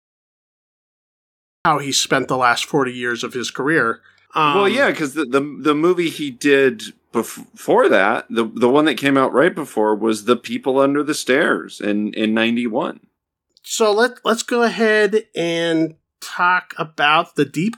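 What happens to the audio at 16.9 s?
Nothing goes wrong at 16.9 s; the speech carries on cleanly through that moment with no dropout, click or distortion.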